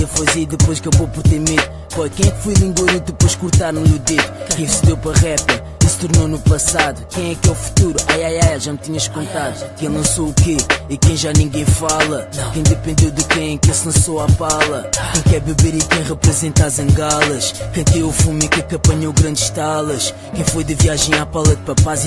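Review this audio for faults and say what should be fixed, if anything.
Nothing needs fixing, because the signal shows no technical problems anywhere in its run.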